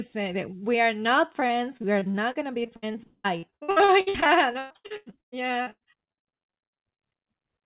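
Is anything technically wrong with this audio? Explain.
Yes. From 1.4 to 7.0 s, right after "are not", there is repeated packet loss (robotic sound). Dozens of gaps, the longest 191 ms, are filled by extending the previous sound, which leaves the speech choppy with pieces missing.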